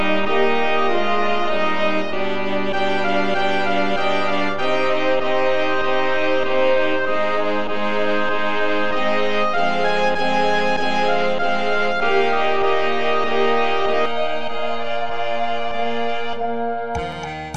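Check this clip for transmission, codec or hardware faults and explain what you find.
One fault is present: channel delay (comb filtering), from 14.06 s to the end of the clip at 17.56 s. Here one channel runs about 1.5 ms behind the other, and when the two are folded to mono, whatever they share cancels at a series of evenly spaced frequencies, the lowest near 400 Hz. The result is a hollow, phasey sound. What separates it from a low-pass filter or codec smearing is that the losses are narrow notches repeating up the spectrum rather than a smooth top-end roll-off, and unlike flanging they stay fixed and don't sweep.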